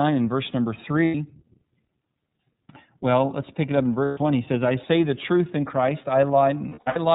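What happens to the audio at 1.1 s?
Packets were dropped from 1.05 to 1.15 s, just after "and verse number". The lost iLBC frames left a gap of about 90 ms, which fits three missing 30 ms frames. The decoder filled it by repeating the last pitch cycle mixed with noise, so the gap sounds like a held, slightly buzzy vowel, and the speech recovers almost immediately afterwards. Underneath, the whole clip passes through the iLBC codec, which fits its 30 ms-frame, 13.33 kbps mode. That codec cuts everything above 4 kHz, leaving the speech a little rough and synthetic, with plainly audible codec damage.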